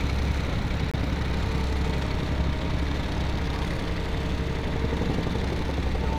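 A recording of everyday sounds with a gap between stream segments at 0.91–0.94 s: a hard-edged hole of silence about 24 ms long. Two segment timestamps fail to meet, so the player pads the interval with silence; no audio is lost, it simply resumes afterwards.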